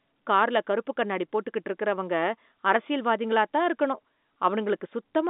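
Listening to this telephone-band speech, carried over G.711 coding with nothing audible above about 3.8 kHz, nothing stood out as a fault.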